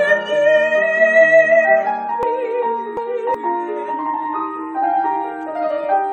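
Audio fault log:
2.23–3.34 s: chunks out of order. A section of about 0.37 s plays two chunks late, so the audio jumbles briefly with three hard joins.
4.82 s: damaged data in a compressed stream. Corrupted frames make the decoder lose sync and hunt for the next header, giving a short blip.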